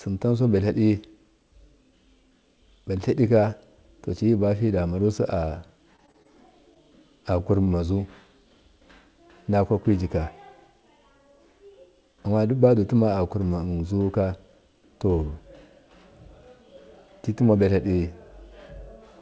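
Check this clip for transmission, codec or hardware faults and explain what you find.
Two transmission faults are audible in this speech, heard through a call path whose cutoff at 8 kHz fits G.722 at 64 kbps.

From 5.46 s to 6.26 s there is repeated packet loss, giving a robotic sound. Packets kept dropping, and each gap was bridged by extending the previous sound, so the speech turns choppy and robotic, with gaps of up to 28 ms.

From 7.65 s to 7.69 s there is a short stall from a late packet. The jitter buffer ran dry, and the last sound was held for about 21 ms before playback resumed, leaving a brief stretched sound with a slight buzz or dip and nothing lost.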